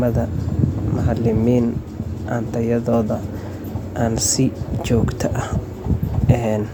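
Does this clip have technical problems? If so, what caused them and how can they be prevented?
No, this clip has no technical problems, so there is nothing to explain or prevent.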